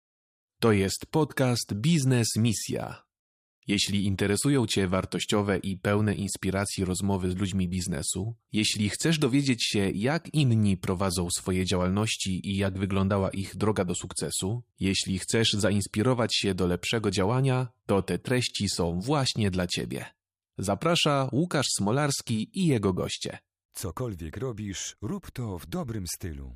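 A speech clip with one overlapping chunks fault at 18.49 s, where about 20 ms of audio plays twice as a new 5.0 s chunk starts before the previous one ends. It sounds like a brief stutter or click. On the waveform, a short stretch repeats with a step discontinuity at the join. On a spectrogram, a thin vertical broadband line appears there.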